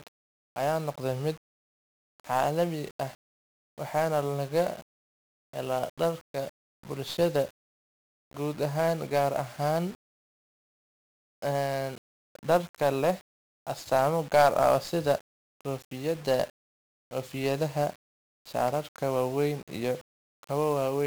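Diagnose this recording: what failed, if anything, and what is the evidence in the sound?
The codec stage failed: the speech has been through 1-bit DFPWM compression for the full clip. From start to finish a dense fuzz and crackle sits on the signal, and the upper treble is buried under hiss. Each sample carries only a single bit that pushes an adaptive level up or down, so the error appears as strong broadband quantisation noise. The heavy damage fits a rate near 48 kbps.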